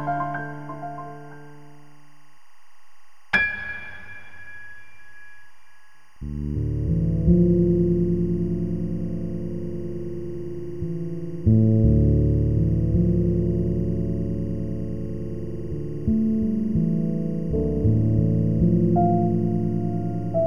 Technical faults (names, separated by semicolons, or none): timecode bleed